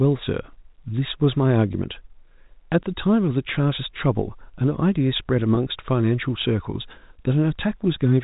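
At 1.73 s, packet loss with pitch repetition drops about 10 ms of the speech, which fits a single lost packet. The receiver fills the hole by looping the last pitch period, so the speech briefly holds with a buzzy sustain. At 5.55–5.57 s the gap is 20 ms, pointing to two consecutive lost packets. The repeated cycle runs longer here, so the held, slightly mechanical buzz lasts a little longer before normal speech resumes through the G.711 telephone band.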